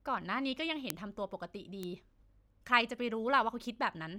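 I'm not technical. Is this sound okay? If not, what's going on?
No. There are two clicks, at 0.90 s and 1.83 s. Each is a bit error spike: one stored digit in a single sample flipped, so the level jumped suddenly and snapped back. It sounds like a sharp tick. The first is louder.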